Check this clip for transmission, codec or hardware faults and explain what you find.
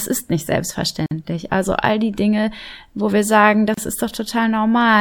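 Two short dropouts break up the speech, both gaps at a join of encoded pieces. The first runs from 1.06 to 1.11 s, about 50 ms of silence. The second comes right after "wo wir sagen", from 3.74 to 3.78 s, about 33 ms. Each looks like separately encoded chunks glued together without trimming the encoder's start-up delay and last-frame padding. You hear a little hole with smeared edges, then the speech picks up right where it left off.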